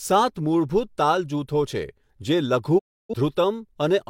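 At 2.78 s speech fades in 20 ms into a digital broadcast dropout; failed frames stay muted until 3.14 s, blanking waveform and spectrogram.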